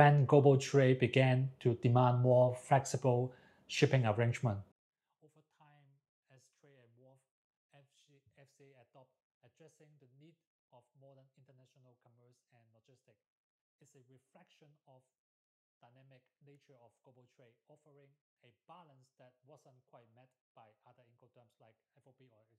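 One channel inverted, from 4.72 s to the end: the sound suddenly collapses, dropping by about 37 dB to a faint residue. This is likely one stereo channel with reversed polarity, so material common to both sides cancels when summed to mono.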